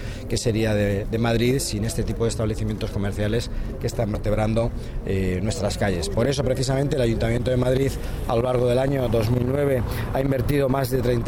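At 0.30 s the sound jumps forward by a few milliseconds, and at 4.15 s there is a longer skip of roughly 15 ms, with no gap of silence at either point. Both fit a dropped buffer (overrun): the likely cause is that the recording software fell behind, the hardware overwrote unread samples, and the audio on either side was spliced straight together.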